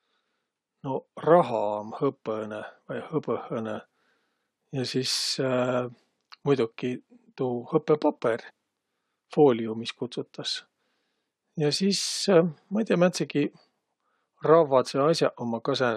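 At about 8.49 s the speech jumps forward abruptly with a tiny blip, and a chunk of the talk simply isn't there. That's most likely a stream segment skipped: one piece of the segmented stream failed to load, so the player carried on with the next.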